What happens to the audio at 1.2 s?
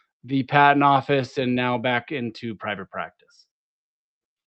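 At 1.2 s the clip is inside a run of repeated timing corrections that lasts from 0.14 s to 4.42 s. The receiver keeps repeating short slivers of audio to stay in step with an incoming stream that arrives too slowly, so playback runs at about 96% of normal speed and gains roughly 150 ms in total. Each repeat is tiny and unevenly spaced.

Underneath this is clock drift between sender and receiver, present throughout. The sender's audio clock runs about 3% slower than the receiver's, so the jitter buffer keeps draining and must be topped up with repeated material. These small timing stumbles recur irregularly across the clip and are not confined to 1.2 s. The call codec's coding noise and high-frequency roll-off above 8 kHz are also present at this point.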